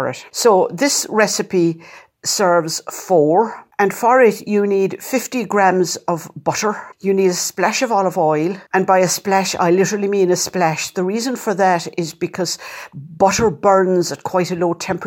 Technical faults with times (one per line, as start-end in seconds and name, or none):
none